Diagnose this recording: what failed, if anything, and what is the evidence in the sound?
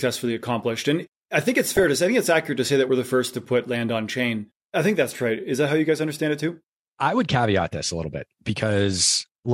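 The failure is in the broadcast reception and codec stage: DAB burbling, where bit errors from weak reception slipped past error correction into the MP2 audio data, at a rate of around 0.4 percent. From 1.59 to 1.88 s the speech is broken by short blips of noise as corrupted samples inject short bursts of noise into individual sub-bands. The span fits roughly fourteen damaged MP2 frames, and any corrupted scale factors would make sub-bands jump in level for up to a frame.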